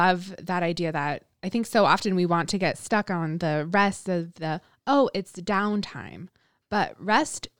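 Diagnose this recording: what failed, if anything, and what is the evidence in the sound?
Nothing in this speech recording points to a failure at any stage of the chain, from capture and conversion through transport, storage and playback, so there is nothing to diagnose.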